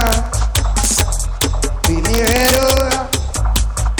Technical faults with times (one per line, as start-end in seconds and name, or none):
0.01-0.14 integer overflow
0.56-1.01 integer overflow
1.42-1.44 integer overflow
1.84-3.14 integer overflow
3.56 integer overflow
3.99 integer overflow